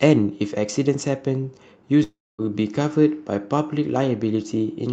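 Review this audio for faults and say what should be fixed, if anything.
From 2.03 to 2.41 s the speech breaks off in what is likely a long network dropout. The receiver stretches the last sound into a fading buzz. About 0.24 s of near silence follows. Speech returns at 2.41 s with about 0.36 s missing. Forward error correction, redundancy and a steadier network link would help prevent this.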